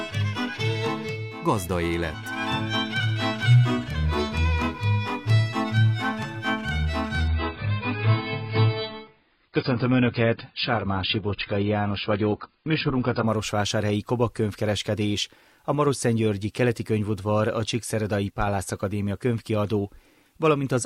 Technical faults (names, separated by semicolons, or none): adaptive stream at a lower bitrate